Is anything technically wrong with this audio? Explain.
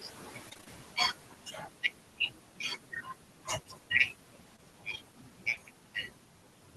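Yes. The recording has three kinds of technical fault: noise suppressor artifacts throughout, a burst of repeated packet loss near the start, and three short concealed packet losses later on.

Noise suppressor artifacts are present for the whole clip. A suppressor is pulling down the frequency bands it judges to be steady noise by about 12 dB, recalculating every frame. The room noise sits about 19 dB below the speech. Between phrases that background drops away, and under the speech it returns, so the residue breathes.

Repeated packet loss (robotic sound) occurs from 0.49 to 0.68 s. Within that stretch, five short gaps arrive in quick succession, none longer than 20 ms, and nearly half of the span is filled in by the receiver rather than carrying real audio. Each gap is patched by extending the preceding sound, and the next gap lands before the signal recovers. This gives a choppy, robotic texture with fragments missing.

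Short concealed packet loss occurs at 4.56–4.60 s, 5.50–5.54 s and 5.54–5.58 s. The last two sit back to back, forming one longer disturbance. Each loses about 20 ms of audio before reaching the decoder. The receiver bridges each hole by continuing the last sound, pitched if voiced or as shaped noise if not, then crossfades back. The result is a brief smear or wobble, and a short consonant can drop out entirely.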